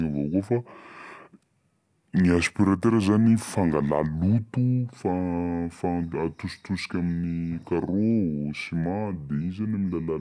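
Throughout, the speech plays at a wrong sample rate, roughly 0.69 times normal speed and about 6.5 semitones low, which fits 32 kHz audio played at 22 kHz. Unlike a pitch shift, tempo and pitch drop together.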